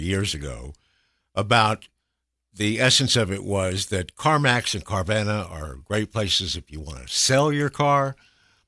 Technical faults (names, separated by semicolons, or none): none